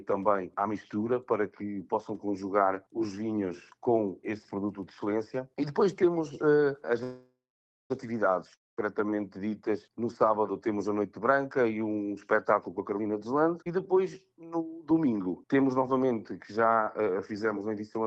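At 7.03 s packets likely stalled in transit and the jitter buffer ran dry, producing a call audio freeze lasting until 7.92 s. The receiver stretches the last sound into a fading buzz, then about 0.52 s of silence, before playback resumes where it stopped. Nothing is lost, but the whole stream now runs 0.87 s later.

From 8.54 to 8.79 s a long network dropout follows, likely caused by packets that never arrived. The last sound again decays into a brief hiss and roughly 0.2 s of silence. When the audio returns, about 0.24 s of material is gone.

Between 12.57 and 13.00 s the jitter buffer, holding more audio than its target, trims pitch-period-sized slices repeatedly. This jitter buffer speed-up plays the audio at 128% of normal speed with the pitch unchanged, cutting around 150 ms and giving a noticeably rushed passage.

At 13.64 to 13.68 s a skip ahead occurs. Roughly a tenth of a second is discarded while later audio was already queued, so playback jumps forward across a nearly seamless splice with a small chunk missing.

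A second, milder jitter buffer speed-up runs from 14.81 to 17.33 s at 108% speed. It removes around 200 ms in total, so the sound is subtly hurried over that stretch. Throughout, the Opus call codec's band limit near 12 kHz softens the top end.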